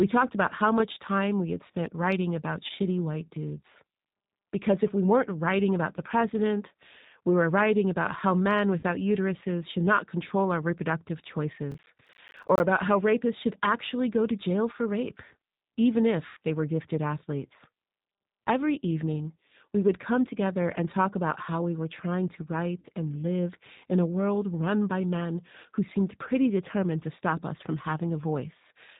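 Speech carried over a G.729 codec throughout, with everything above 4 kHz missing, a hard ceiling on a spectrogram, and a slightly rough, synthetic texture that fits the 8 kbit/s G.729A variant. VoIP packet loss concealed by the speech codec occurs at 2.67 s (after "had spent writing about", about 20 ms lost, fitting one packet), 8.79 s (after "writing about how men", 40 ms), 16.27–16.37 s (after "jail for rape even", 100 ms) and 22.80 s (40 ms). Each gap is bridged by a fading extrapolation of the last sound that shows as a smeared, repeating spectrum with a dipping envelope. Processor overload crackle runs from 11.72 to 12.60 s, where around thirty missed deadlines, fitting roughly 10 ms buffers, each leave a hard-edged silent dropout. This is heard as gritty tearing and seen as a dense row of notches in the waveform with vertical broadband clicks on a spectrogram.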